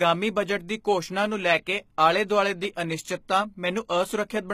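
From start to finish, the speech was likely squeezed through HE-AAC compression at a low bitrate, one that fits roughly 20 kbps. Only the lower spectrum is genuinely coded; the treble is rebuilt by copying lower bands upward under a coarse envelope, so its harmonics no longer align with those below. The damage is plainly audible: s sounds come out gritty, metallic and lispy, and nothing at all remains above 14.9 kHz.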